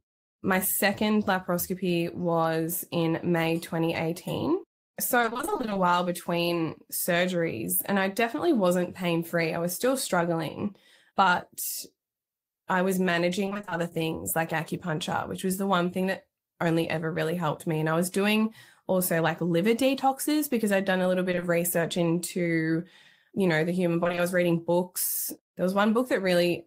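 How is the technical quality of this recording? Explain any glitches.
The recording is speech carried over a packet-based connection, and its technical quality is marred by packet loss at five points in the 27-second clip. Some are brief concealed dropouts and some are longer bursts that turn choppy and robotic.

Short concealed packet loss occurs at 0.95 s and again across 21.31 to 21.43 s. In each case, a 20 ms slice of audio failed to reach the decoder on time. The receiver papered over it by extending the preceding sound, then faded back into the real signal. The single gap near 1 s is heard as a momentary smear or wobble. At 21.3 s, three 20 ms holes fall back to back, so about 60 ms is patched across a stretch of roughly 120 ms.

Repeated packet loss with robotic sound hits three stretches: 5.21 to 5.77 s, 13.45 to 13.73 s, and 24.03 to 24.19 s. Here the stream kept dropping 20 ms pieces in quick succession, and roughly half of each span was synthesized rather than received. 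Because every fill is a continuation of the last sound and the next hole arrives almost immediately, the speech turns choppy and robotic, with fragments missing. The longest of these bursts is the one near 5.2 s.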